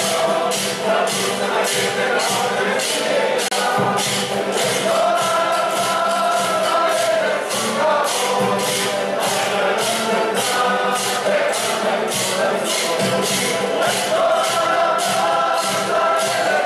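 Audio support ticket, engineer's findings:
Gap at a join of encoded pieces, 3.48–3.51 s: 31 ms dropout in continuous sound, edges smeared by the codec, sound resumes where it stopped. Probable component: segment concatenation. Separately encoded pieces joined untrimmed; encoder start delay and last-frame padding left in.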